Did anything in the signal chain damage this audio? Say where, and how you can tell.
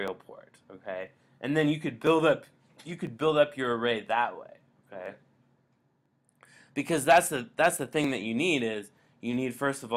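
Yes. Periodic USB or driver dropouts run from 0.08 s to 9.05 s: about ten clicks spaced almost exactly 1.0 s apart. At the driver or buffer stage, something stalls the bus once a second and roughly a millisecond of audio is skipped, splicing the waveform discontinuously.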